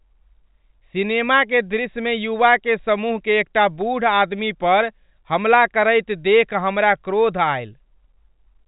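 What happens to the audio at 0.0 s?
Nothing goes wrong at 0.0 s: the audio is intact there, carried over G.711 telephone coding with its usual cut-off just under 4 kHz.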